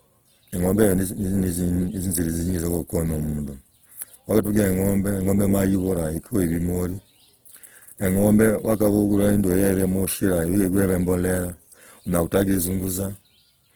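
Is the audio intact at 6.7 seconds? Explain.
No, Opus compression damage runs through the whole clip, including 6.7 s. The roughness is likely from Opus in music mode at a low rate, consistent with about 16 kbps. Band energies are kept but thinly coded bands are filled by folding or noise, so the speech sounds grainy and rough while content still extends to about 20.4 kHz.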